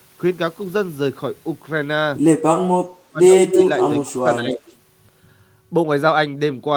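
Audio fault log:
2.55–3.57 s and 4.07–4.64 s, speech suppressed in double talk: the speech sinks sharply while the far side talks over it. The first dip is very deep, about 35 dB at worst, and spread over roughly 0.7 s. The second is milder, about 15 dB, over roughly half a second. The likely cause is an echo canceller that could not tell near speech from loudspeaker echo and ducked both.
3.46–3.81 s, 4.05–4.1 s and 4.68–4.75 s, echo leak: a delayed copy of the speech trails it by about 174–175 ms. At 3.46 s it is strong, within about 5 dB of the speech. The later scraps are faint, about 25 dB and then 35 dB down, heard as brief ghostly flickers. This is likely loudspeaker pickup that escaped the far end's echo canceller and was sent back.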